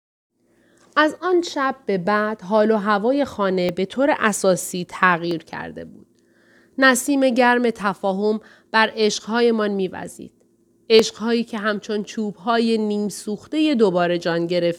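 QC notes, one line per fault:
3.69 s, 5.31 s, 10.99 s, 12.04 s: dropped samples. Four isolated sharp clicks, each a thin vertical line across the spectrum. The likely cause is about 0.7 ms of samples missing, so the waveform jumps abruptly to a later value. The gap is too short to remove any speech.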